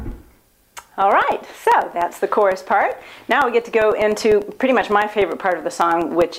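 A steady train of small ticks runs through the audio from about 0.12 s to 6.32 s, spaced exactly 0.1 s apart, ten per second, and audible only where there is signal to interrupt. These are periodic USB or driver dropouts: at a fixed interval something stalls the USB link or the audio driver, and roughly a millisecond of sound is lost each time and replaced with silence. The abrupt gap in the waveform is what produces each click.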